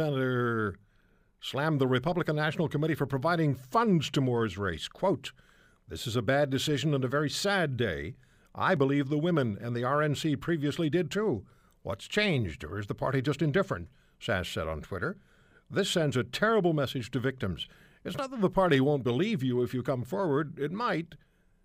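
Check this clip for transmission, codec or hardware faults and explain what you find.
Two short discontinuities point to a likely dropped buffer (overrun). At 8.77 s, between "very sad day I" and "the women and the", and at 18.19 s, just before "not that the party", the speech jumps ahead, losing a few milliseconds, roughly 5 and 10 ms.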